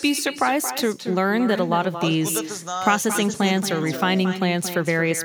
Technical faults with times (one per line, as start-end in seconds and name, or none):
0.00-5.25 echo with no canceller